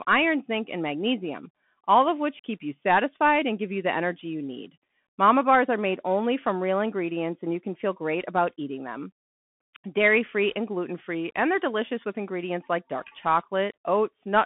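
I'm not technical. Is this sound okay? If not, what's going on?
No. The whole clip has passed through a Bluetooth CVSD headset codec, an old phone-style link that keeps nothing above about 3.8 kHz. From start to finish the speech sounds narrow and muffled, s sounds turn scratchy, and a grainy hiss sits underneath.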